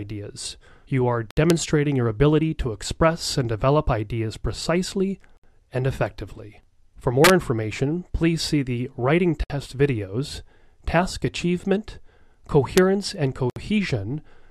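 The audio was encoded in 4-second pieces and joined untrimmed, a gap at a join of encoded pieces, so silences of about 64 to 66 ms interrupt the sound at 1.31, 5.37, 9.44 and 13.50 s. An integer overflow also wraps loud peaks to the opposite sign instead of limiting them, producing harsh cracks at 1.50 s, 7.24 to 7.30 s (about 3 dB over the limit) and 12.78 s.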